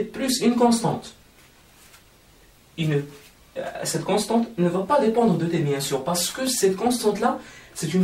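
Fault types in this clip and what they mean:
Dropped samples: a handful of samples likely went missing from the stream, a fraction of a millisecond's worth, so the waveform leaps to a later value. At 6.47 s this gives one sharp click, a thin vertical line across the spectrum, with nothing audibly removed.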